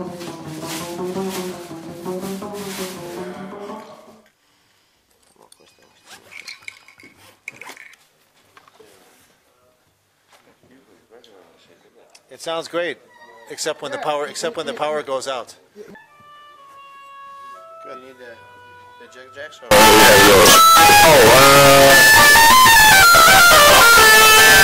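From 19.71 s to the end at 24.63 s, the audio turns into a float read as integer fault. The level jumps to a near-square waveform at an almost fixed, high level. It is extremely loud and harsh. Background noise rises to the same level as the main sound, yet the pitch can still be followed. The likely cause is 32-bit float samples being interpreted as 32-bit integers, so sign and exponent bits dominate each value.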